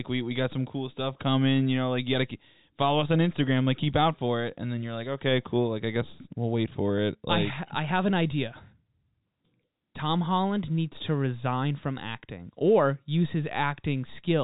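The speech comes through intact with no technical faults, carried in the narrow telephone band of G.711 coding that stops at 4 kHz.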